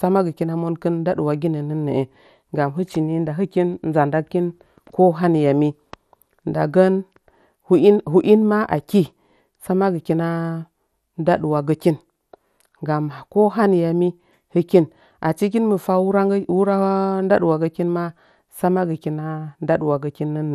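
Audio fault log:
Throughout: MP2 compression. The speech is dull, with nothing above about 15.1 kHz, and carries a plainly audible gurgling, granular distortion. This likely comes from MPEG Layer II coding at a low rate, consistent with around 80 kbps, switching upper sub-bands off and coarsely quantising the rest.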